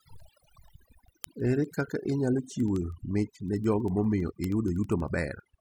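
Overdone noise removal runs through the whole speech clip. The noise reduction was pushed too hard. Single frequency bands close to its noise estimate get cut deep or shut off entirely. Quiet parts of the voice are caught and removed with them. The background drops and breaks up into small twinkling specks. The voice has its softer detail stripped away.

From 0.12 s to 5.56 s, word clock ticks appear. A digital link is being received by a device on its own clock, not locked to the sender. The two clocks seem to drift apart by roughly 300 ppm. Each time they slip past each other, one sample is dropped or repeated. That produces a sharp tick roughly every 70 ms, about seventy in all. The ticks keep a steady rhythm but vary in strength.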